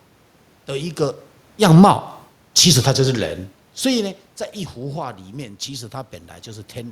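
It's a speech recording with one real problem: automatic gain falling. Between 1.51 and 3.33 s the gain control pulls its level down by about 4 dB, so the speech and the room noise behind it sink together. The level changes around 1 s and again around three and a half seconds are just the talker shifting position, not the system.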